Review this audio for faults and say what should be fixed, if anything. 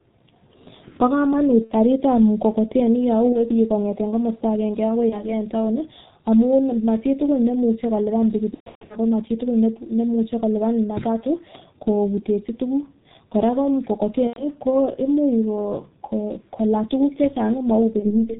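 G.723.1 codec, throughout: the speech carries the heavy damage of this early telephony coder running at about 6.3 kbit/s. Nothing above 4 kHz survives, and because the voice model is refreshed only every 30 ms frame, the sound is muffled and hoarse, with smeared consonants. To prevent it, carry the call on a wideband codec at a higher bitrate rather than G.723.1.

VoIP packet loss concealed by the speech codec, at 1.64–1.72 s, 3.33–3.43 s, 5.09–5.37 s, 8.54–8.97 s, 14.27–14.45 s and 17.99–18.32 s. In each gap the decoder keeps repeating its last pitch and spectral shape at falling gain, so the sound stretches into a fading buzz. The weak, distorted stretch lingers after the gap, which is why some disturbances last longer than the loss itself. The longest, at 8.54 s, fits scattered losses totalling around 300 ms. To prevent it, add forward error correction or redundancy and a more robust network path.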